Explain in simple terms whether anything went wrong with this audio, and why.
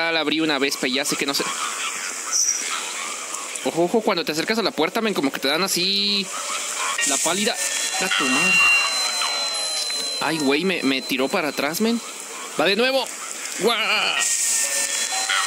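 A microphone was picking up the loudspeaker it was feeding, so sound went round and round the loop, getting louder each time. That is loudspeaker feedback squeal. From 7.72 s to 9.14 s, one high tone around 2.8 kHz swells up over about a second until it is louder than the rest of the audio, a piercing whistle. It stops at 9.14 s, when the loop was broken.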